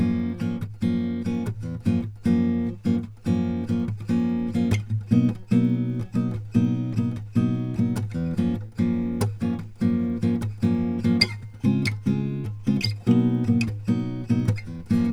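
A piece of music runs its full length with a steady 20 Hz ticking, the mark of a resampler restarted on every block: each 50 ms block was converted alone, likely from 44.1 kHz to 48 kHz, leaving a small error at every edge. Unlike irregular dropout clicks, these arrive evenly and follow the signal.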